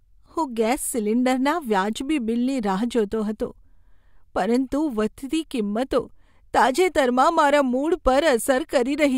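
No technical faults can be heard anywhere in the recording. Nothing in the signal chain draws attention to itself at any point in the speech.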